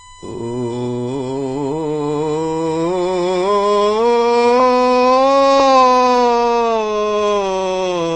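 AAC compression runs through the whole music clip from 0.0 s. Nothing survives above 9.7 kHz, and the top end sounds dull, smeared and plainly warbling. The likely cause is a low-bitrate AAC-LC encoder, which fits roughly 24 kbps, trimming bandwidth to save bits.

USB whine sits under the music from 0.0 s to 5.53 s as a steady 1 kHz tone, roughly 25 dB below the music. Current drawn in the bus's 1 ms frames leaks through power or ground, imposing that fixed pitch until it stops.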